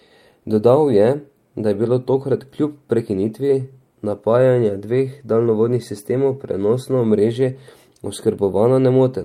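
Nothing in the recording stood out as a technical problem on listening.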